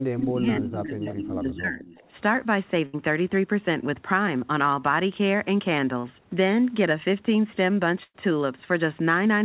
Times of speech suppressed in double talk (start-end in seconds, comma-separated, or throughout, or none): 0.00-1.96